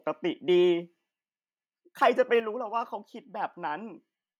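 A microphone volume stepped down at 2.4 s in this speech clip: voice and background fall together by about 5 dB in a single step. This likely comes from call software judging the input too hot and lowering the device's input volume at once.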